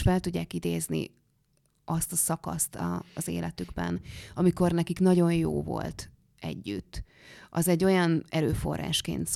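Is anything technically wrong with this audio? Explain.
No, nothing technically wrong.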